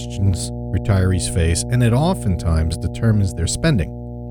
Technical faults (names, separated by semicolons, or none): mains hum